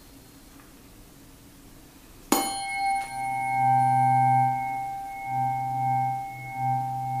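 A brief burst of loose connector crackle breaks into the audio from 3.00 to 3.09 s. It lasts about 90 ms. A worn or dirty contact is flickering between open and closed. That chops the signal into irregular scratchy fragments.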